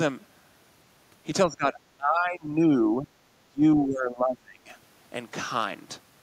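From 1.47 to 1.78 s, 1.97 to 3.1 s and 3.45 to 4.71 s the speech is turned down by as much as about 20 dB, in patches. This is speech suppressed in double talk, likely an echo canceller muting its own talker while the far side spoke. Unlike packet dropouts, the level sags rather than vanishing.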